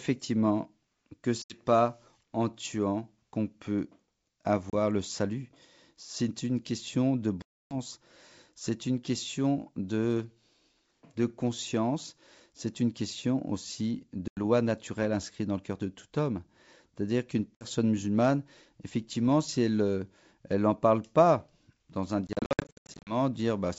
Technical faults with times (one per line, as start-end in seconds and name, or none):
1.42-1.61 packet loss on an ADPCM call
4.70-4.75 packet loss on an ADPCM call
7.42-7.76 packet loss on an ADPCM call
14.28-14.39 packet loss on an ADPCM call
17.55-17.66 packet loss on an ADPCM call
22.27-23.16 packet loss on an ADPCM call